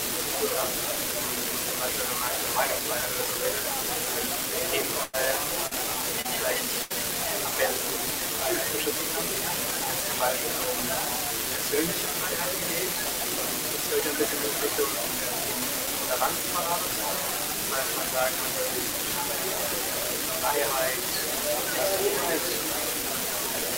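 A crackle runs through the whole clip and carries on in the pauses. This is an unreliable data bit. One data line is marginal, so its bit flips in a random share of samples. Each flip adds a spike of the same size, heard as a steady fizz.

From 5.03 to 5.15 s there is a burst of packet loss. About 100 ms of audio never arrived in time. The receiver stretched the last sound and faded it out. The result is a held buzz or fading hiss, then a jump forward.

At 5.67 to 5.73 s and again at 6.21 to 6.26 s comes short concealed packet loss. Each hole is a few hundredths of a second. The receiver filled it by continuing the last sound, then blended back. Each one is heard as a brief smear or wobble.

A second burst of packet loss falls at 6.82 to 6.92 s. This time about 80 ms is missing. The same fill-and-fade concealment covers it. It gives a shorter held tone or hiss, and the sound resumes past the gap.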